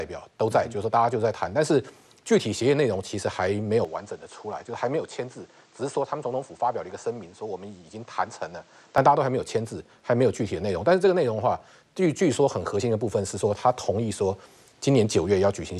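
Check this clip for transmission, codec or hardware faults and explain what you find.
One fault is present. From 3.85 s to 8.98 s the audio shows an input switched to a poorer device, likely the capture changing to another microphone or a headset profile mid-recording. The band narrows abruptly, with nothing above 8.8 kHz, so the sound goes dull and boxy. The level falls by about 5 dB, and a new noise floor appears roughly 30 dB below the signal. There is no gap at either switch, and full bandwidth returns at 8.98 s.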